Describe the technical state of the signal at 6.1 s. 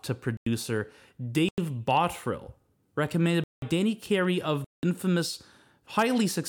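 At 6.1 s the speech signal is intact, with no audible fault.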